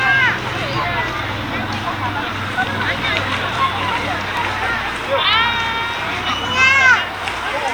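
From 0.54 s to 7.25 s, a regular click recurs about every 0.96 s, seven or so in all. This is the pattern of clock drift buffer slips, likely from two devices on separate clocks differing by roughly 700 ppm, so the buffer periodically drops or repeats a few tens of samples.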